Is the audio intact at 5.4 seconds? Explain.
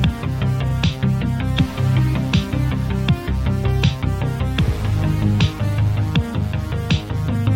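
Yes, the audio is intact at 5.4 seconds, with no dropout, click, distortion or other fault at that moment.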